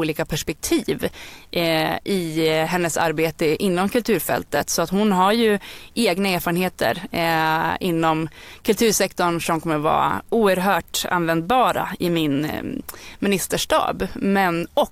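From start to finish the speech carries a grainy, rasping edge that rises and falls with the speaking itself, roughest on soft syllables and word tails, where the quietest detail crumbles into sputtering or drops out to silence. The likely cause is low bit depth without dither: the audio seems to have been cut to about 9 bits by truncation, leaving an error roughly 40 dB below the speech that tracks the signal instead of sitting as steady hiss.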